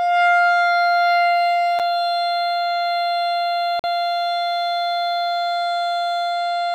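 At 1.79 s and again from 3.79 to 3.84 s the music drops out abruptly: gaps between stream segments. Each two-second segment's timestamps leave a hole the player fills with silence, about 7 ms first, then 45 ms, with hard edges but no lost audio.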